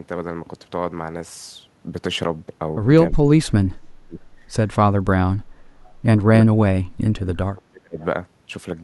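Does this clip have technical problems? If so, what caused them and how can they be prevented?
Yes. Speech suppressed in double talk: the echo canceller likely mistook overlapping far-end speech for its own echo and attenuated the talker at 3.11–4.21, 4.96–5.22, 5.39–5.50, 6.38–6.64 and 7.11–7.99 s, with dips up to roughly 35 dB. Tuning double-talk detection to favour near-end speech prevents this.

Echo leak: residual loudspeaker echo likely slipped past the canceller and returned about 317 ms late as faint scraps, some 30 to 40 dB below the speech, at 5.85–5.91 and 8.00–8.05 s. Headsets or better acoustic isolation between loudspeaker and microphone prevent this.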